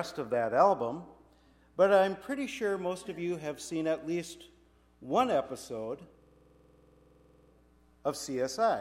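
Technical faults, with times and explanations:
6.22 to 7.52 s, system hang loop: the computer or its audio driver stalled, and the sound hardware kept replaying the same stretch of its ring buffer. A 46 ms slice of audio repeats exactly, about 28 times, which fits a 2048-sample buffer. The loop cycles at 21.5 repeats per second. Little or no audio seems to be lost when playback resumes.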